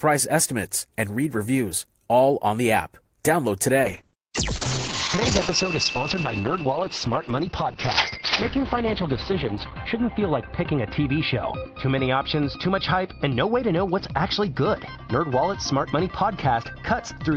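A call bitrate drop sets in at 3.84 s and lasts to the end of the audio. The sound turns rough and muffled. The top of the spectrum falls from 20 kHz to 6 kHz. The encoder has been told to spend far fewer bits, so it codes everything more coarsely and discards the highs. The coarseness suggests a fall from about 32 kbps to 8 kbps. The worst stretch holds for 5.75 s, and the quality never recovers.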